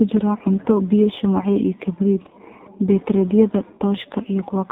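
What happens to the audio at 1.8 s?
At 1.8 s the speech is passing through two faults that run through the whole clip, so nothing starts or stops there.

The first is AMR narrowband mobile codec damage, and it is heavy. Nothing above 3.8 kHz survives, and the voice is rebuilt from a vocal-tract model driven by a few pulses every 5 ms, which gives it a buzzy, synthetic edge. That degree of damage points to one of the lowest bit rates, around 5 kbps. A plain low-pass filter would also remove the top of the spectrum, but it would leave the voice natural. Here the timbre itself sounds manufactured.

The second is sample clock jitter. The converter's clock wanders by roughly a microsecond or two, so each sample is taken slightly early or late. The resulting error grows with the slope of the waveform and sits around 50 dB below the signal. It comes through as a faint roughness or hiss that swells on louder, brighter sounds. 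A steady noise floor would stay constant and remain audible in pauses, but this hiss vanishes whenever the speech stops.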